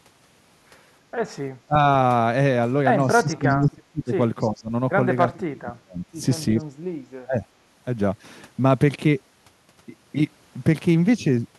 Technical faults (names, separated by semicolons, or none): speech suppressed in double talk; echo leak